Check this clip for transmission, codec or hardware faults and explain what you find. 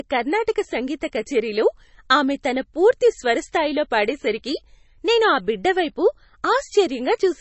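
One fault runs through the whole speech clip: heavy MP3 compression artefacts, likely from encoding. Nothing is present above 8 kHz, where the encoder has cut the treble to save bits. Below that, weak frequency lines drop in and out from frame to frame, so the sound turns watery and swirly, with metallic chirps on s sounds and smeared onsets. The damage fits a bitrate under 30 kbps. A plain low-pass filter would dull the top the same way but leave the remaining band steady, without this swirl.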